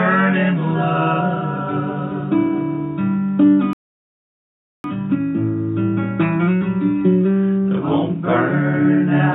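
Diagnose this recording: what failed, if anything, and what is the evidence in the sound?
A rebuffering stall at the playback stage: the sound drops to silence at 3.73 s and resumes at 4.84 s exactly where it stopped, adding about 1.1 s. The player's buffer ran dry. The waveform shows a flat gap, and the spectrogram a blank band, with no content missing.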